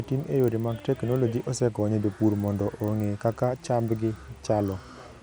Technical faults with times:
0.00-5.23 resampler restarted on every block

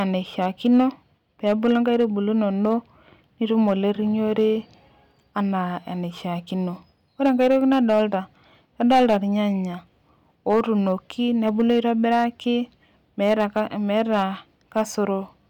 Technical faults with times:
0.00-15.49 hard clipping

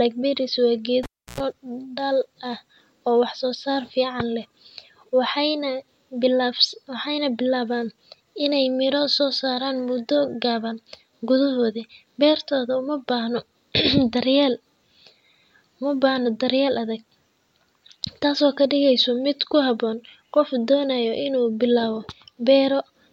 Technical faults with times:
1.03-1.40 cable pulled and plugged in

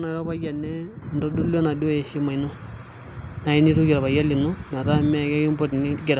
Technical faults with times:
1.02 microphone volume stepped up

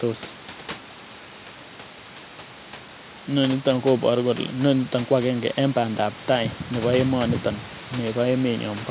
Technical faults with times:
none

